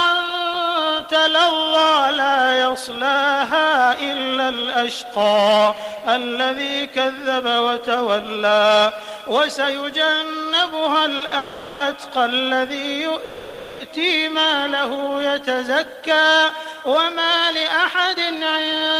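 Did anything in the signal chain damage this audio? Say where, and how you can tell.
Yes. The network stage, through the receiver's jitter buffer, is where it goes wrong. There are two short stalls from a late packet, at 11.17 to 11.23 s and 11.26 to 11.34 s, each holding the last sound for about 30 ms and 50 ms. You hear a brief smeared hold with a faint buzz, and then the audio resumes from the same point. The buffer ran dry while waiting, so nothing is lost, but each stall adds delay.

Straight after those, a call audio freeze runs from 11.37 to 11.83 s, and another from 13.24 to 13.82 s. These last about 430 ms and 550 ms. In each, the last sound is drawn out into a fading buzzy tail that never drops to true silence, and playback then picks up where it stopped. The likely cause is packets held up in transit, which leaves the buffer empty for that long. Together these holds push the playout about a second behind.

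The receiver then recovers part of that delay with a jitter buffer speed-up from 16.52 to 18.94 s. The audio runs at about 105% of normal speed with the pitch unchanged, so it sounds slightly hurried. Underneath, short pitch-period-length slices are cut out repeatedly, roughly 150 ms in all, which shrinks the oversized buffer back toward its target depth.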